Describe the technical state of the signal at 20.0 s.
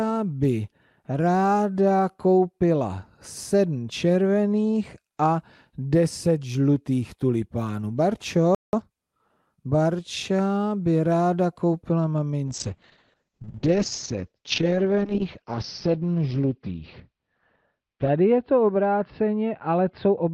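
At 20.0 s the signal is inside a call bitrate drop that starts at 12.48 s and lasts to the end. The encoder codes far more coarsely, which fits a fall from roughly 40 to 8 kbps, and audio bandwidth narrows from 20 kHz to 6 kHz, so the sound is rough and muffled.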